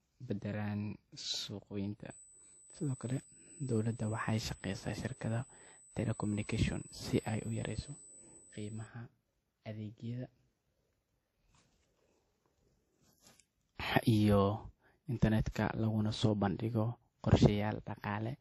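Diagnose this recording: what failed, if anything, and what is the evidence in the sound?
At the codec stage, the speech has nothing above 12.1 kHz for the whole clip, and two different flavours of compression smear sit on top of each other. That points to transcoding between lossy codecs, likely a low-rate WMA pass re-encoded to AAC-LC at around 48 kbit/s. Each encoder added its own damage, and the earlier band limit carried through.

On the analogue wiring side, there's a USB whine from 2.10 to 8.87 s: a fixed 8 kHz tone, loudest at its 16 kHz harmonic, and not far under the speech. That's the bus's 125-microsecond microframe current getting into the power or ground.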